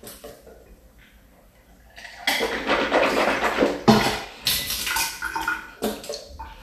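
Nothing technically wrong turns up anywhere in this recording of sounds, so there's no fault to point to.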